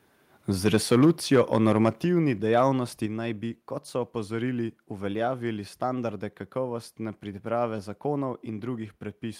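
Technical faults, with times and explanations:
0.66–1.88 s, microphone overload: the loudest syllables take on a harsh, crackling edge up to "dejavnosti naj bi kot", with a few percent of samples flattened. The input gain likely drove peaks about 4 dB past the converter's ceiling, slicing off the waveform tops.
1.05 s, 2.04 s and 3.06 s, microphone volume stepped down: speech and background drop abruptly by about 2, 5 and 4 dB, the second step just before "dejavnosti naj bi kot", the third before "naj bi kot so". This is likely call software reacting to the clipping by cutting the device's input gain.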